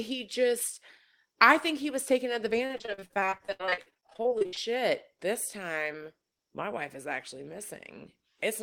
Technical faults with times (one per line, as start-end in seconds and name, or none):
2.65-4.58 repeated packet loss (robotic sound)